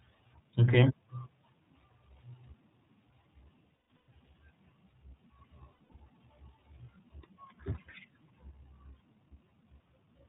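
The whole recording passes through the iLBC codec, a narrowband VoIP coder. Nothing above 4 kHz survives, and the speech has a slightly rough, synthetic grain. The plainly audible damage fits its 15.2 kbps mode with 20 ms frames. What separates this from a simple telephone band-limit is that grain. Each frame's excitation is coded independently, so the roughness comes from the coding itself, not only from missing treble.

Lost iLBC frames first occur between 3.64 and 4.08 s. About 320 ms of audio is missing, scattered across that 440 ms stretch, and the longest continuous gap is around 150 ms. The decoder fills each hole by repeating the last pitch cycle mixed with noise, so the gaps sound like a held, buzzy, breathy vowel rather than silence or a click. A second, shorter cluster falls between 5.72 and 6.01 s, with 180 ms lost over 280 ms and no single run much longer than 70 ms. Unlike concealment in codecs that predict from earlier frames, the voice here snaps back to normal almost immediately after each gap.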